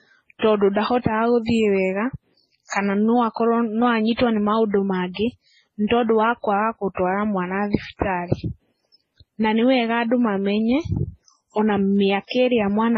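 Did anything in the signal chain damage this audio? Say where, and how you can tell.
Yes, at the codec stage. The whole speech clip has nothing above about 8.2 kHz, and it carries several layers of artefacts at once: smeared, warbly transients sitting under a separate swirly, metallic haze. That stacking points to transcoding between lossy codecs, likely a very low-rate MP3 pass fed through something like HE-AAC and then MP3 again. Each re-encode wasted bits preserving the earlier damage, added its own, and kept the lowest band limit.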